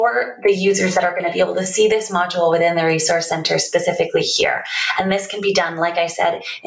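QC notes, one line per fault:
Throughout, gain pumping: the level swings by around 15 dB, so loud and quiet parts sit close together and the sound feels squashed. The likely cause is input gain set far too high, with a fast limiter clamping down on each peak. Unlike a noise gate, the background never cuts to silence.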